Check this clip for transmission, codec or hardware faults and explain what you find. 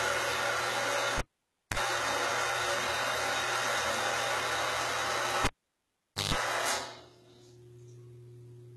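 Two faults are present in this recording of everyday sounds: a long-standing codec problem and two cable disconnections.

Throughout the clip, the audio was likely squeezed through a very low-bitrate codec and then re-saved as a high-bitrate MP3, an instance of low-bitrate audio saved at a high bitrate. The second encoding cannot restore what the first discarded, so nothing above about 11.8 kHz remains. The sound is dull, with the top octave missing.

The cable was pulled and plugged in twice, from 1.18 to 1.78 s and from 5.45 to 6.34 s. Each time the signal path breaks with a pop. Near silence follows for about 0.55 s and then about 0.85 s. As the plug's tip makes partial contact, a 50 Hz mains buzz bursts through, lasting 0.04 s the first time and 0.15 s the second. A second pop marks the sound's return.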